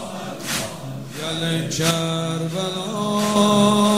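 The audio drops abruptly by about 6 dB from 1.91 s to 3.36 s, then returns to its earlier level, which points to one channel dropping out, likely a stereo channel lost before the mono sum. Unlike a gain dip or fade, the level falls and recovers in clean steps of almost exactly half amplitude, and material carried only by the missing side vanishes entirely rather than just getting quieter.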